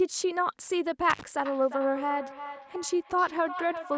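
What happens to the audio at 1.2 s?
At 1.2 s the speech is in the middle of an intermittent contact fault, running from 1.1 to 1.23 s. A loose plug or cable briefly lost its connection. The line stays open for about 55 ms, and the signal drops out for that gap. Crackle marks the edges where the contact breaks and remakes. Faint hiss fills the open stretch. The call microphone's upper limit near 8 kHz is normal band-limiting, not part of this fault.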